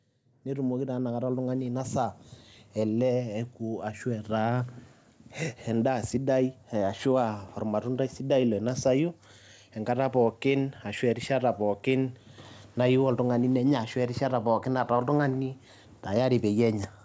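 From 0.44 s to 4.39 s the speech climbs steadily by about 7 dB, the mark of automatic gain rising: the gain control judged the input too quiet and kept turning it up over nearly four seconds. What separates this from a speaker leaning closer is that the room noise swells in step with the voice, with no change in tone or proximity. The whole band stops at 8 kHz, consistent with the G.722 call codec.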